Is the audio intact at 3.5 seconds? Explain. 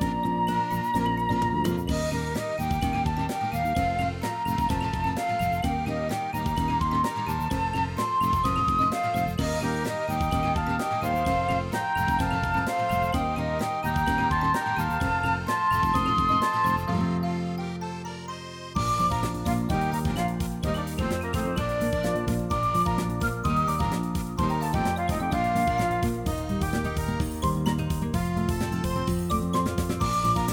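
Yes, the audio at 3.5 seconds is intact, with no dropout, glitch or other fault at that moment.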